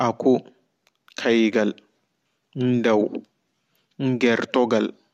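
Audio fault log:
No fault heard anywhere in this speech recording.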